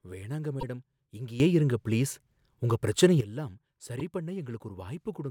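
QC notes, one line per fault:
0.59–0.63 s and 3.99–4.01 s, repeated frames: at each point one compressed block of about 26.1 ms plays twice, giving a short stutter where the same sliver of speech sounds again. The duplicated block restarts abruptly where it doesn't line up with the audio before it, so each repeat can be heard as a brief hiccup. Each repeat adds 26.1 ms to the running time, and a block of that length fits a typical codec frame.
1.40–3.21 s, sudden gain jump: the speech and the background noise step up together by about 12 dB at 1.40 s, stay at that raised level, and drop back at 3.21 s. Both edges are abrupt, with no fade, so the change is heard as a hard switch in loudness. The likely cause is a digital gain change applied from one sample to the next without a ramp.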